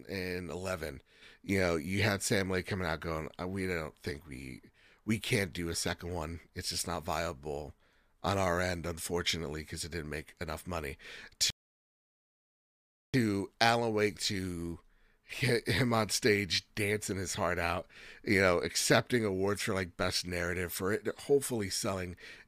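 At 11.50 s the player runs out of buffered audio, causing a rebuffering stall: after "didn't make enough money" the speech drops to silence for about 1.6 s, then resumes exactly where it stopped at 13.14 s.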